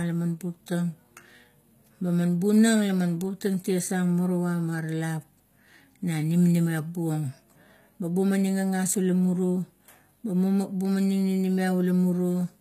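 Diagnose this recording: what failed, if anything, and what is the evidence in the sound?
Codec stage, likely HE-AAC compression, fitting a low bitrate near 20 kbps: treble rebuilt from copied lower bands, gritty sibilance throughout, nothing above 14.9 kHz.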